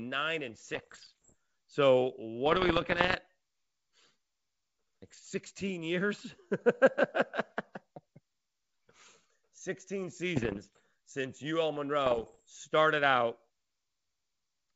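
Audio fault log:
0.74–1.35 s, 2.46–3.15 s, 5.06–5.21 s, 10.36–10.80 s, 12.06–12.41 s: bit errors on an ADPCM link. Around one bit in a hundred arrives flipped. Each error throws off the decoder's step size and predictor, so pops and rough bursts ring on briefly with jumpy level, over otherwise clean G.722 wideband sound.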